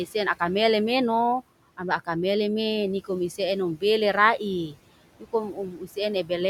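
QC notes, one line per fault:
throughout, noise suppressor artifacts: the background sinks away between phrases and creeps back up underneath the speech. The suppressor is pulling down every band it judges to be steady noise, frame by frame, cutting that noise by about 18 dB.
5.52–5.97 s, speech cut by the noise suppressor: the speech here sounds swallowed and faint, dipping by about 11 dB at its deepest over roughly a third of a second. The suppressor mistook these quieter speech sounds for background and turned them down with it.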